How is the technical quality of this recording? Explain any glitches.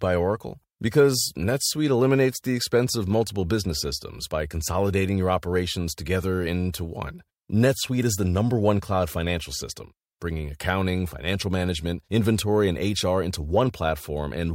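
No technical glitches are audible.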